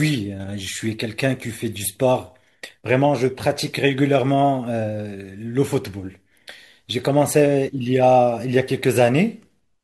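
No technical faults are audible anywhere in the audio.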